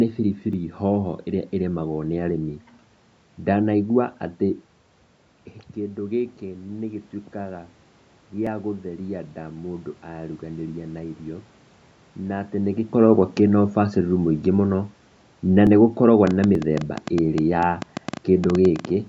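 At 0.53 s, just before "hoho iria", a dropped buffer (overrun) occurs, likely from the program collecting samples too late. A few milliseconds of audio vanish and the two sides join directly, with no gap of silence, so the sound jumps slightly forward. The same brief skip recurs at 8.47 s and at 15.67 s, just before "nĩ gũkoragwo", losing about 1.5 ms and 4 ms respectively.

From 16.27 s, right after "na nĩ gũkoragwo", to 18.86 s, a train of clicks runs over the sound. Around twenty similar pulses arrive at an uneven pace, roughly 8.54 per second, peaking about 10 dB above the speech. The likely cause is interference or a faulty connection or power supply. Unlike the isolated buffer drops, these ticks keep coming, pauses included, and nothing is skipped. Within this stretch, at 16.55 s, one more brief dropped buffer adds its own jump.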